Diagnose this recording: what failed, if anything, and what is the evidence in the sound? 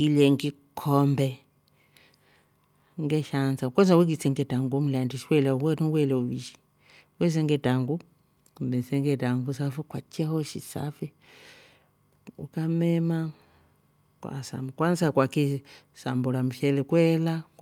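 Nothing failed in this recording, and the sound gives no evidence of any fault at any stage.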